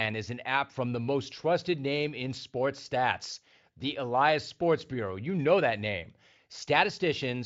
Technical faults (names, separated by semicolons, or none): none